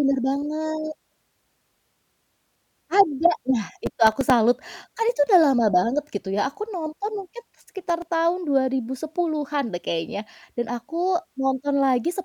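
Between 3.86 and 4.30 s, and again from 7.81 to 8.10 s, the speech picks up processor overload crackle: a gritty tearing where about ten tiny buffers, each a few milliseconds long, miss their deadline and are filled with stale audio. The hard edges at each splice make the grit. Unlike a single dropout or clipping, it is a dense run of clicks riding on the voice that stops cleanly once the load eases.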